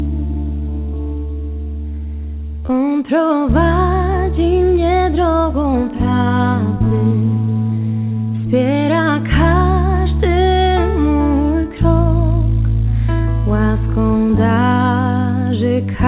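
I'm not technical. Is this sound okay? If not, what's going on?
No. Around 2.6 seconds there are two quick glitches, back to back.

First, a short stall from a late packet: from 2.60 to 2.65 s a piece of the call arrived late, so the receiver stretched the last bit of sound by about 27 ms while waiting. Nothing is lost, but that moment is briefly held too long, with a faint buzz or dip.

Right after, from 2.67 to 2.70 s, comes a short concealed packet loss: about 20 ms of audio never arrived, so the receiver patched the gap with a guessed continuation. You hear a tiny smear or wobble, and a very short sound there may vanish.

The slightly muffled, phone-like tone throughout comes from the call line itself, which carries nothing above 4 kHz.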